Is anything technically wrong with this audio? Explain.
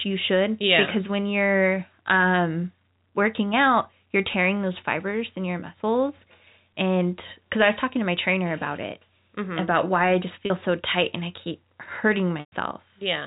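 Yes. There are two dropouts of packet loss with pitch repetition, over a G.711 telephone-band signal that cuts off at 4 kHz. At 10.46 to 10.50 s, between "about why I just" and "so tight and I", about 40 ms is lost, which fits two 20 ms packets. The receiver loops the last pitch period, so the sound holds briefly with a buzzy tone. At 12.40 to 12.52 s, about 120 ms is lost. The repeated period fades to silence before the audio cross-fades back in.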